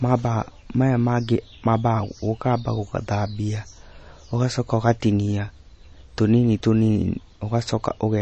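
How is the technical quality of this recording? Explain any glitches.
The speech carries plainly audible coding damage from start to finish. Throughout, there is a hard treble ceiling at 8.3 kHz with a watery, swirling texture. That points to likely MP3 compression at a starved bitrate, around 32 kbps. A plain low-pass filter would sound dull but clean, without the swirl.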